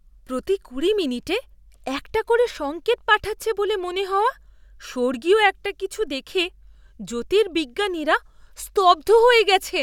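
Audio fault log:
No faults can be heard anywhere in the speech. Nothing in the audio calls for a logged event.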